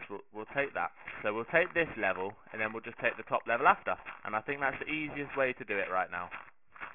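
Aliasing runs through the whole clip: the audio was downsampled without an anti-alias filter, which points to a drop to about 6 kHz. Everything above 3 kHz folds back below it as unrelated, gritty, metallic tones roughly 10 dB under the real signal, crowding up to the band edge.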